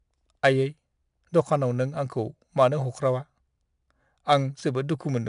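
Speech runs through the whole clip with a gritty hiss riding on every louder syllable, rising and falling with the level, and sharp onsets sound rough and distorted. Nothing is present above 10.6 kHz, which fits a sample rate near 22 kHz and a data rate around 89 kbps. This is 4-bit ADPCM compression: each sample is coded as a small step from a prediction, so the coding error tracks the signal and the adapting step lags on fast attacks.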